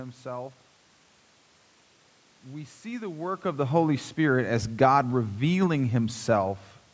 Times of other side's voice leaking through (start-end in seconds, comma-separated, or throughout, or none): none